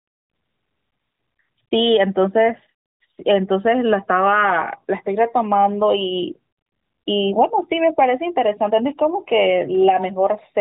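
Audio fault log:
No faults heard in this speech clip.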